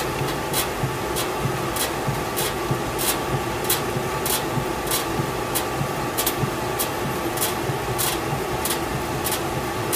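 No technical fault can be heard anywhere in the audio, and the signal runs continuously without any event that points to trouble in the recording or transmission chain.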